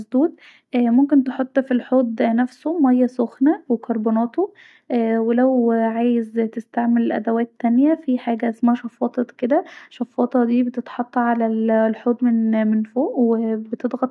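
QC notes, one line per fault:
Nothing to flag here, as the speech comes through without any technical trouble worth noting.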